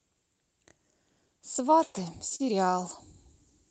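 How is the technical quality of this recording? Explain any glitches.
The speech has three timing faults linked to a clock mismatch and a tonal fault near the end.

Clock drift between sender and receiver runs through the whole clip. The sending clock runs roughly 2 percent slow, so the receiver's buffer keeps draining and playback has to be patched to stay continuous. The result is small, unevenly spaced timing hiccups.

Repeated timing corrections occur from 0.34 to 1.76 s. Because of that drift, the receiver repeats short slices of audio, playing this stretch at about 98 percent speed and adding roughly 40 ms in total. It sounds like a slightly dragging, uneven tempo with faint stutters.

A short stall from a late packet occurs at 2.35 to 2.41 s. A packet arrived late, the buffer ran empty, and the receiver held the last sound for 39 ms until it came. Nothing is lost, but one sound lingers unnaturally, with a slight buzz or dip.

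Pre-emphasis left on affects the audio from 2.57 s to the end. A CD-style 50/15 µs treble boost was applied without the matching de-emphasis, leaving highs about 8 dB stronger at 10 kHz than at 1 kHz. The sound turns thin, bright and sharply sibilant.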